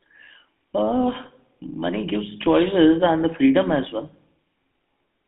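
From start to finish the speech has a buzzy, gravelly roughness, and everything sits in a narrow band from about 150 Hz to 3.6 kHz, so it sounds thin and boxed in. The damage is plainly audible. This is the sound of the GSM full-rate codec, consistent with its 13 kbps coding. It models the throat and mouth as a filter and rebuilds the excitation from a coarse, regularly spaced pulse pattern, which is what lends the voice its grainy buzz.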